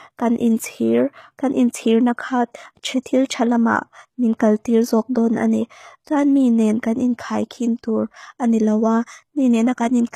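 Speech with plainly audible HE-AAC compression throughout: sibilants sound gritty and metallic, and the treble is synthetic, cut above 14.9 kHz. This likely points to about 20 kbps.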